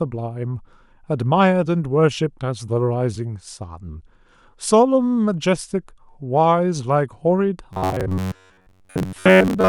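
From 7.73 s to 9.68 s the speech becomes a rigid, metallic buzz fixed near 93.8 Hz, loosely following the words. This is robotic sound from repeated short buffers: audio likely arrived too seldom, so a 10.7 ms slice was looped for most of that stretch.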